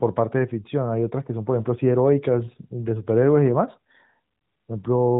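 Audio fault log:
No faults heard.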